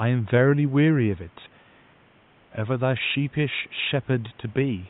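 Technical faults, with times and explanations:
No technical faults can be heard in this speech recording. A faint room noise sits about 34 dB below the speech; it belongs to the space around the microphone and is not a fault of the system.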